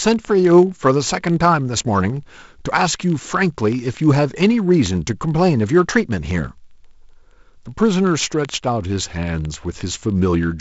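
Word clock ticks run from 0.12 s to 10.59 s: the receiving device's clock is not locked to the sender's and runs roughly 0.1% off, so about every 20 ms a sample is dropped or repeated, giving hundreds of sharp, uneven ticks over the G.722-coded, 7.7 kHz-limited speech.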